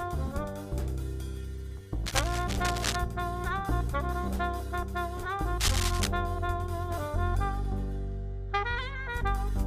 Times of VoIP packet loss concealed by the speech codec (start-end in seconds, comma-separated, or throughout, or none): none